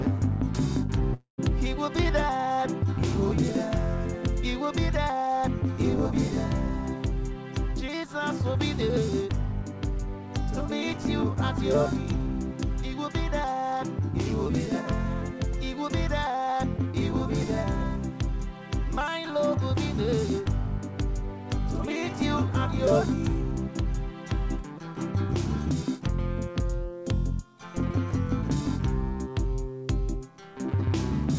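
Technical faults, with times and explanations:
1.14–1.40 s, long network dropout: the preceding sound smears into a fading buzz, then goes silent for about 130 ms before resuming with about 240 ms lost, likely a network stall. Unlike a brief packet-loss glitch, the concealment runs out into silence.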